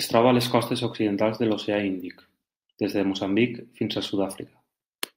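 No technical faults are audible anywhere in the speech.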